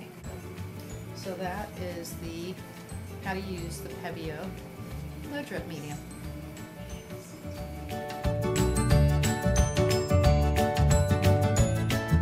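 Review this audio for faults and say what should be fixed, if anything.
DAB burbling at 2.29 to 2.46 s and 4.13 to 4.20 s: weak reception lets a few tenths of a percent of bits slip past error correction, so MP2 sub-bands jump about for up to a frame at a time, giving short noise blips. Better antenna placement or a stronger signal should stop it.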